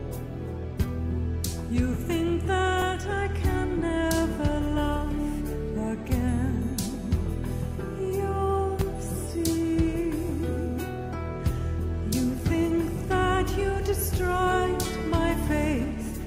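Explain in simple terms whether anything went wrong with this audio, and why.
Two tiny skips, at 2.82 s and 8.81 s, come from overlap between stream segments: joining two-second chunks, the player trimmed sound that wasn't duplicated.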